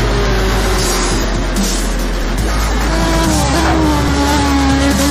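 Dropped buffers (overrun) at 0.40, 1.24, 2.24 and 4.08 s: each is a jump with the sound skipping ahead, roughly 40 ms, or about 70 ms at 1.24 s, likely samples overwritten before being read.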